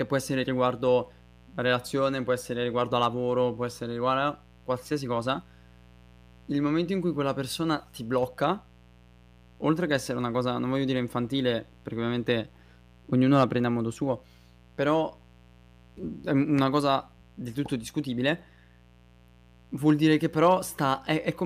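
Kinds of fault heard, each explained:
Mains buzz: A steady raspy buzz sits under the speech the whole way, spikes from 60 Hz wiring whose harmonics climb high, roughly 30 dB down.
Hard clipping: Peaks overran a stage by about 2 to 3 dB and got flattened, giving brief crackle near 2.96 s, 13.34 s and 19.89–20.54 s.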